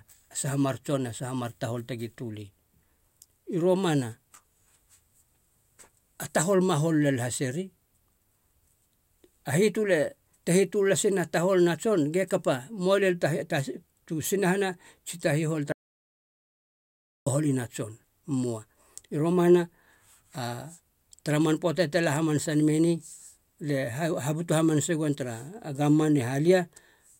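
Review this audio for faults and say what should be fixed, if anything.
At 15.72 s, right after "tsi ta hihol", the speech cuts off abruptly and the track falls into dead silence, with no room tone or background hiss, until it resumes at 17.26 s. About 1.54 s of speech is simply missing. This is an audio dropout to silence, most likely from the input being interrupted, for example by a loose connection, a failed link or a momentary mute, while the recorder kept writing silence. The lost section needs to be re-recorded or patched. To prevent it, secure cables and wireless links, and monitor input levels during recording so that a lost signal is caught immediately.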